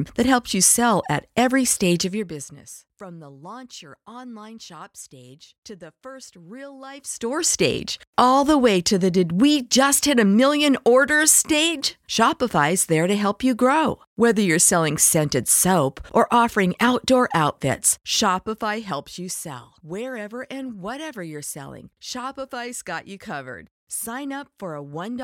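A speech recording with no technical faults to report. Where the level rises or falls, the change is smooth and gradual, like a fader being moved.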